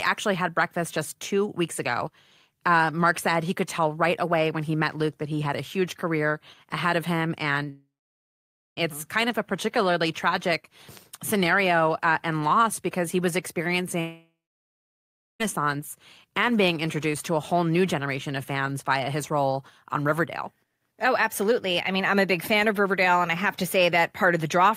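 After "career ahead of him" at 7.69 s, and again at 14.01 s, the sound smears into a fading buzz, then drops to near-silence for about 0.9 s and 1.1 s respectively, likely a long network dropout. The waveform flattens and the spectrogram goes blank until 8.79 s and 15.42 s.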